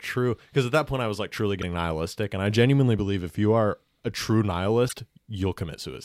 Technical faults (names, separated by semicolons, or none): damaged data in a compressed stream